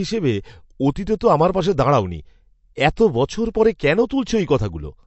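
Throughout the speech, nothing is heard above 8 kHz, and weak detail flickers with a watery, swirling texture. The hard treble ceiling and unstable sibilance point to MP3 compression as the likely cause, fitting a low-bitrate encode around 48 kbps, rather than simple low-pass filtering, which would stay smooth.

At 2.96 s, a short hiss of about 10 ms arrives just before a sharp attack, which sounds softened. This is pre-echo: the codec spread noise across its block, filling the silence ahead of the onset. It differs from a click because the noise precedes the transient.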